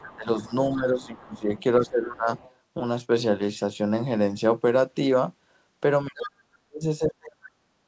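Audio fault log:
0.0–1.63 s, 2.38–2.54 s, 6.24–6.31 s, other side's voice leaking through: a faint second voice sits under the main talker. It is about 25 dB down at the start, about 30 dB down in the short scrap at 2.38 s, and strongest at about 15 dB down in the brief burst at 6.24 s. The likely cause is a loudspeaker playing the far end into the microphone, with the echo canceller leaving a residue. On a spectrogram this shows as a second, weaker set of harmonic stripes that does not follow the main voice. Like the rest of the audio, it has no energy above 8 kHz.
0.16–1.49 s, 1.8–2.28 s, 6.08–7.6 s, speech suppressed in double talk: the main voice dips and chops while the other side is also talking. The drops are about 15 dB, then about 20 dB, then about 40 dB in the last stretch. The affected time is roughly 0.7 s, half a second and a full second. This is likely an echo canceller that could not tell the talker from the echo and turned both down. 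The waveform envelope shows sudden notches, and the spectrogram shows the harmonics thinning or going blank in patches.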